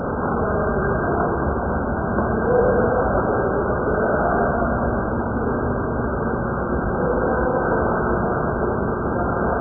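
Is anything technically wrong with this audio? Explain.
Yes. Throughout, the audio has most likely passed through heavy AAC compression at a very low bitrate, around 8 kbps. The encoder discards everything above 1.6 kHz and coarsely quantises the remaining bands, so the sound is dull, muffled and smeared, with a warbling texture.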